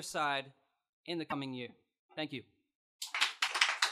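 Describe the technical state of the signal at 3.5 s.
At 3.5 s there is a brief glitch from 3.46 to 3.49 s, about 30 ms, where the audio skips forward and the sound breaks up. This is likely a broken MP3 bit reservoir. After frames were lost, the next frame reached back for data it had stored in earlier frames and decoded bytes belonging to a different frame instead. The disruption fits one 26.1 ms MP3 frame decoding wrongly before the stream recovers.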